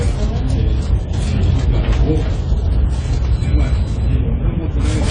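Throughout, the audio sounds dull and smeared, with a warbling, fizzy texture on sustained sound. This is likely AAC compression, consistent with roughly 24 kbps. On a spectrogram, nothing appears above 9.7 kHz.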